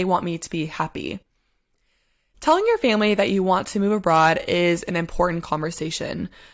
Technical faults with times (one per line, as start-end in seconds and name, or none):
none